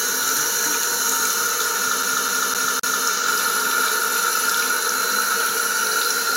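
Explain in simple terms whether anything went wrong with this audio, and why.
CD stuck on one turn, from 2.03 to 3.05 s: a scratch keeps throwing the laser back, so the same quarter-second of sound repeats four times with brief mutes.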